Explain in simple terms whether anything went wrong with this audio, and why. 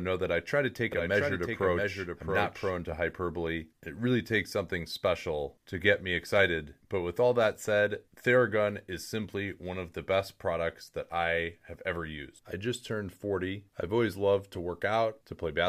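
From 0.92 to 2.94 seconds the clip has a doubled audio track. The speech is heard twice, with a quieter copy trailing about 0.7 seconds behind. The copy starts and stops abruptly. Likely cause: a slower path captured the sound a second time.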